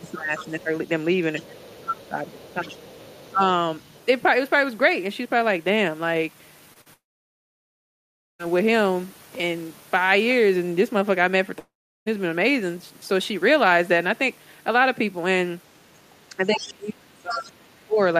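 Right from the start, 0.0 to 0.7 s, the speech ducks by roughly 10 dB, and under it a faint second voice sits about 25 dB down. That voice hangs around until 4.05 s. This is the other side's voice leaking through: the far end playing out of a loudspeaker and not fully cancelled from the mic, which is the likely cause. It's low in level.

While that leak runs, the main voice gets pushed down again from 1.49 to 2.79 s, by about 15 dB at worst, and once more briefly at 3.33 to 3.42 s, by about 10 dB. That's speech suppressed in double talk. With both sides talking, the echo canceller most likely couldn't tell the near talker from the echo and pulled everything down.

At 6.73 to 6.77 s and 6.81 to 6.88 s there are two quick smears: short concealed packet loss. Roughly 20 ms and then 40 ms went missing, and the decoder papered over each hole by stretching the sound just before it.

Straight after that, at 6.94 s, comes a long network dropout that lasts to 8.41 s. 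There's a short tail of continued sound, then about 1.4 s of silence, and the speech picks up later with the missing chunk simply gone. The same thing happens from 11.59 to 12.08 s, with around 0.4 s of silence. Both are likely stretches where nothing reached the receiver.

The worst double-talk stretch runs from 16.30 to 18.00 s, with the voice crushed by about 35 dB at its deepest. Two scraps of the far-end voice poke through in there: 16.45 to 16.68 s at about 10 dB below the speech, and 17.30 to 17.44 s at about 15 dB below.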